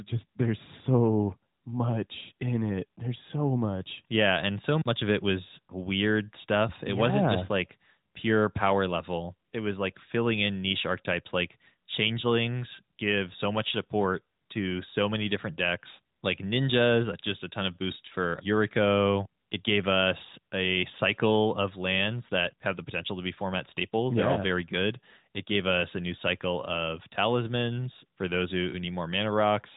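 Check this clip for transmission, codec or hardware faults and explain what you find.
No faults turn up here; the speech has the narrow, phone-style band you'd expect from the AMR narrowband mobile codec, and that's simply how that link sounds.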